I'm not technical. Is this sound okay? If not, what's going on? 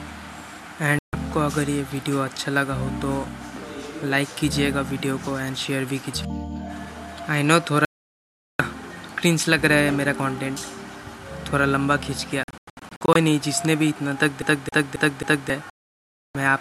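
No, it has two kinds of glitch. The first is a digital broadcast dropout: the receiver briefly lost the signal or got damaged chunks, so it went silent until clean audio came back, and whatever was sent during the gap is gone. You'll hear this at 0.99 s (a quick 0.15 s gap), from 7.85 to 8.6 s (the longest, about three-quarters of a second), from 12.43 to 13.16 s as a cluster of short holes, each no longer than about 0.1 s, and from 15.70 to 16.35 s.

The second is a CD stuck on one turn, the classic skipping-CD stutter. Between 14.42 and 15.50 s, a scratch keeps knocking the laser back to the same spot, so the same 0.27 s snippet plays four times in a row, with a tiny cut at each jump. It sounds like a quick, perfectly regular hiccup.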